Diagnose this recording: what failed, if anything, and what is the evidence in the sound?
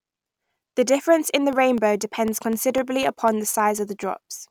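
The failure sits at the driver or buffer stage: periodic USB or driver dropouts. From 0.28 to 4.28 s, around fifteen ticks recur every 0.25 s in the speech, each a fraction of a millisecond of signal replaced by silence. On a spectrogram, thin evenly spaced broadband vertical lines; on the waveform, tiny flat gaps.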